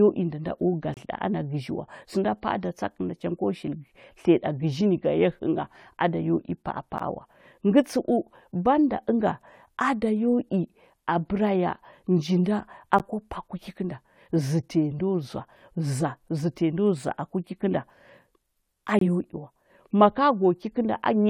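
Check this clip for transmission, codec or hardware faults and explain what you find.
Four short dropouts to silence interrupt the speech at regular six-second spacing.

Gap between stream segments, at 0.94–0.97 s, 6.98 s, 12.99 s and 18.99–19.01 s. The audio arrives as 6.0 s segments whose timestamps don't quite meet, and the player pads each join with silence. Each hole has hard edges and lasts about 28 ms, 11 ms, 14 ms and 24 ms. It briefly chops the speech, but no audio is lost because the silence is inserted rather than replacing sound.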